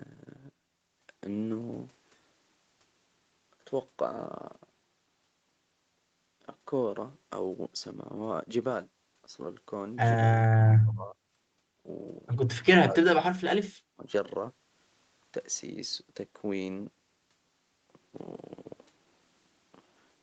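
At 10.81–11.18, 12.63–13.56 and 13.9–14.03 s the speech sinks by up to about 40 dB or breaks off, likely speech suppressed in double talk: waveform gaps, fading spectrogram columns.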